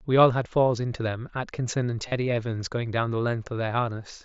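At 0.43 s, concealed Bluetooth headset packet loss fills a brief 15 ms gap. From 2.08 to 2.12 s a longer run is patched by repeating recent waveform, heard as a held buzzy tone; a spectrogram shows smeared, stationary harmonics and the waveform a periodic, full-level stretch.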